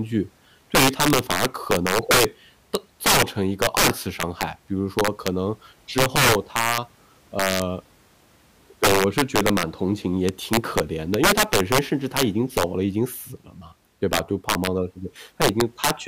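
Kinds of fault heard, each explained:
Integer overflow: The speech is driven about 12 dB past the largest value the integer format can hold. Nothing limits it. Any peak over that limit wraps to the opposite sign, swinging across the full range in one step. Only a small share of samples, around two percent, go over. The damage lands on the loudest moments throughout the clip. There it is heard as violent cracks, far harsher and sharper than ordinary clipping.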